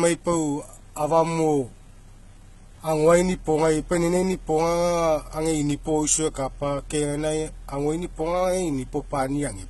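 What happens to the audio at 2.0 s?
At 2.0 s you're hearing two faults that run through the whole clip rather than anything specific to that moment.

The first is low bit depth without dither. The speech carries a grainy, gritty distortion that moves with the signal, and the quieter parts break up into a rough sputter instead of fading smoothly. The error sits at roughly 35 dB below the speech. The likely cause is truncation to about 9 bits with no dither, so the rounding error follows the waveform instead of turning into a steady hiss.

The second is HE-AAC compression. Nothing gets through above 11.8 kHz, and what's left of the treble sounds synthetic, with s sounds coming out lispy and metallic. This is most likely heavy HE-AAC coding at a low rate, something like 16 kbps. The codec keeps only the lower band and rebuilds the top by copying lower content upward under a coarse envelope, so the upper harmonics don't line up with the real ones.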